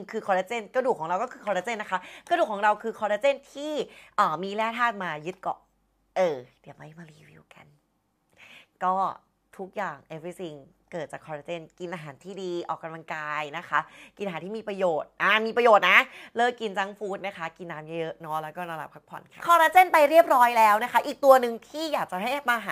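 From 18.18 s to the end, the audio shows crude rate conversion. Samples were repeated by nearest-neighbour picking rather than filtered resampling, which fits a step from 32 kHz to 44.1 kHz. The uneven repetition pattern produces an error signal about 25 dB below the sound itself, made of shifted, inharmonic copies of the content. It is heard as a gritty, inharmonic fizz riding on louder and brighter passages.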